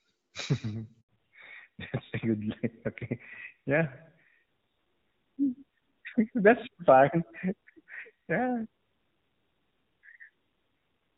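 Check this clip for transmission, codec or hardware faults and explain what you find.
Two faults occur, both near the start and linked to one network change.

A handover gap runs from 1.01 to 1.09 s. While the call was moved from one network to another, no speech frames arrived for 80 ms, so the speech dies away within a few tens of milliseconds and returns only when the new link begins carrying audio. Whatever was said in that window is lost. On a waveform it is a flat, empty stretch. On a spectrogram it is a thin vertical blank band across all frequencies.

A fallback to narrowband follows at 1.09 s and lasts to the end. Before the switch the speech carries the fuller band of the AMR wideband (HD Voice) codec, at a quality consistent with about 12.65 kbit/s. After it, the call lands on an older narrowband codec, sounding like AMR-NB at around 7.4 kbit/s, and nothing above 4 kHz survives. 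The speech turns duller, boxier and rougher. A spectrogram shows energy up to roughly 7 kHz before 1.09 s, then a hard horizontal ceiling at 4 kHz with empty space above.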